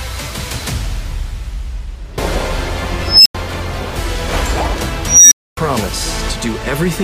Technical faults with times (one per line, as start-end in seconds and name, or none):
3.05-3.35 unstable filter
5.06-5.57 unstable filter